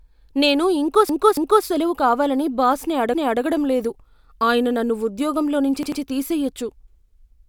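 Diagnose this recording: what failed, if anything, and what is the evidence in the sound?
Repeated frames, at the stage where compressed audio was written or sent. Right after "నేను ఇంకో", the stretch from 1.09 to 1.65 s is a 0.28 s chunk played two extra times. After "బాస్ని", 3.14 to 3.42 s replays a 0.28 s chunk once. After "నుంచి", 5.83 to 6.02 s loops a 0.09 s chunk twice. That gives you those stutters. The block sizes fit codec frames of about 93 ms being duplicated, and the copies add roughly a second of extra running time.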